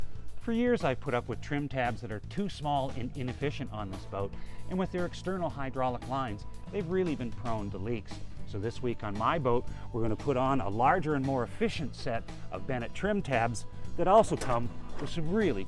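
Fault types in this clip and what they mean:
No technical faults can be heard anywhere in this clip. There is nothing to list for it.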